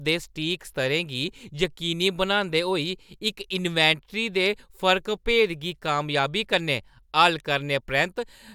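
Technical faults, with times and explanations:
No technical faults detected in the speech; nothing to log.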